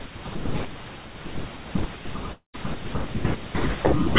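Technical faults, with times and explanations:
2.32–2.56 s, long network dropout: sound smears into a fading buzz, then goes silent; about 220 ms is lost, likely to undelivered packets the receiver concealed.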